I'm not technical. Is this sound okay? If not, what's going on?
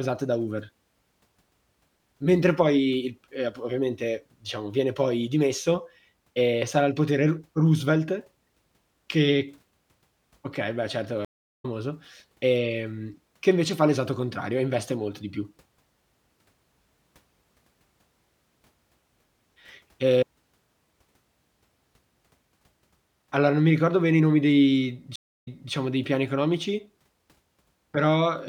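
No. There are two stream reconnects: the connection dropped, playback went silent, then restarted mid-stream. After "okay beh certo" at 11.25 s, 0.35 s of silence, then speech resumes about 0.4 s later, skipping audio. At 25.16 s, after "bene i nomi dei", 0.27 s of silence, then it jumps back 0.29 s, repeating "dei".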